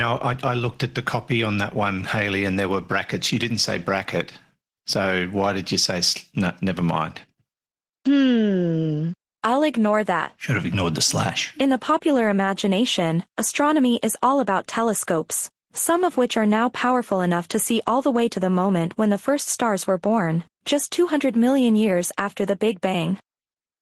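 Opus voice compression runs throughout: the speech sounds grainy and a touch synthetic, with coarsely coded excitation that fits roughly 16 kbps in hybrid mode.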